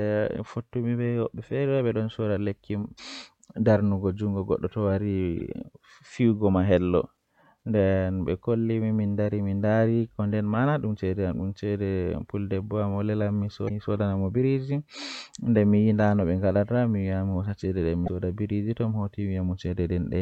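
Damaged data in the compressed stream at 2.94–3.00, 5.39–5.41, 13.65–13.71 and 18.04–18.09 s: corrupted frames throw the decoder out of sync, producing brief glitches.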